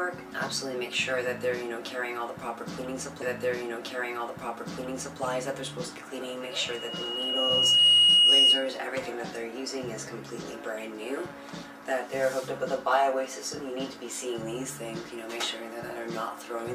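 A short stretch of audio replays: from 3.21 s to 5.20 s, about 2 s plays again after a small blip. This stream segment repeated because the player queued the same segment twice. At 6.42 s a steady 2.9 kHz tone swells over roughly a second and a half into a squeal well above the programme, about 15 dB louder, until 8.70 s. This loudspeaker feedback squeal arises when a microphone picks up its own loudspeaker and loop gain exceeds one at that frequency.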